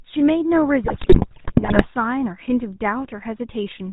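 Throughout, the speech carries the gravelly, buzzy roughness of the GSM full-rate codec, which fits its 13 kbps mode. The codec rebuilds the voice from a vocal-tract model excited by sparse regular pulses, so a spectrogram shows nothing above 4 kHz and smeared, comb-like harmonics.

From 0.84 to 1.86 s, GSM bit errors corrupt the decoder's filter, pitch and gain values, which fits a bit error rate near 5 percent. The voice breaks into squawks, pops and gargling, with sudden amplitude spikes on the waveform and frame-sized blocks of distorted spectrum.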